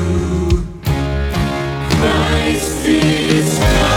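A time-stretched section runs from 1.0 s to the end of the audio, where the pace abruptly drops to about 0.63 times its original speed while the pitch stays where it was. Everything after that point drags against the first second. The likely cause is software lengthening the audio to fill a set duration, holding pitch steady by repeating short pieces of the signal instead of simply playing it back more slowly.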